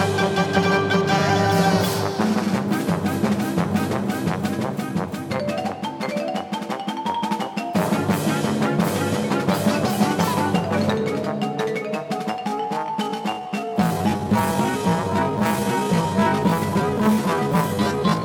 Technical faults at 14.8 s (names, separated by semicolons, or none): time-stretched section